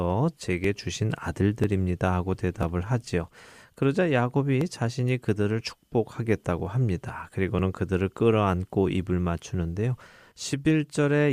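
Speech with overlap between stream segments: tiny skips at 0.64, 1.64, 2.63, 3.62, 4.61, 6.60 and 7.59 s, roughly once per second, showing as waveform jumps and thin vertical spectrogram lines.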